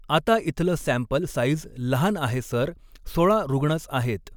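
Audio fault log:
Nothing stood out on listening to this speech recording.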